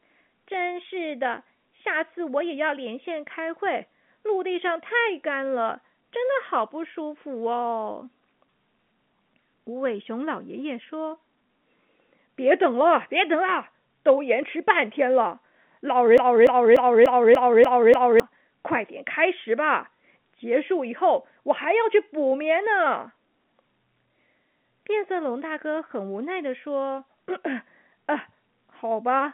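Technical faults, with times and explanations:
16.18–18.20 s, broken-record loop: a 0.29 s fragment of the speech plays seven times back to back, identical on every pass, and whatever should have followed in those two seconds is gone. The likely cause is a stall in the player or stream that kept resending the last piece it held. On a waveform, the same shape repeats exactly. On the spectrogram, within the telephone band that stops near 3.7 kHz, the pattern appears as a row of identical blocks.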